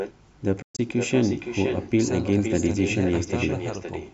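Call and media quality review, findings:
Echo with no canceller, whole clip: every phrase shadowed by a quieter, thinner copy about 8 dB down, roughly half a second late. Far end's loudspeaker is feeding its mic and nothing is cancelling it, so the speech returns after the network round trip.

Bluetooth dropout, 0.62 to 0.79 s: choppy holes, about 142 ms lost across 162 ms, the longest gap 122 ms, then the speech picks up further along. The likely cause is the wireless link missing packets, which fits roughly seven being dropped. Band tops out at 8 kHz from the call mic processing, as expected.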